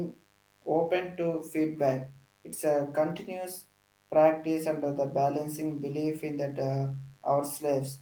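A steady mains buzz sits under the speech from start to finish, well below it in level. Sharp switching spikes from a dimmer, rectifier or unshielded run are getting into the signal twice per 50 Hz cycle, spraying harmonics of 50 Hz up into the kilohertz range, so it comes across as a raspy, edgy drone. The speech has passed through Opus voice compression, whose light, fullband coding is consistent with a moderate rate around 24 kbps.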